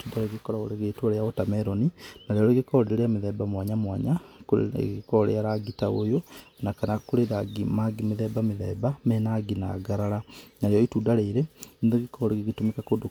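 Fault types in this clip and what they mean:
No audible faults occur anywhere in this speech recording.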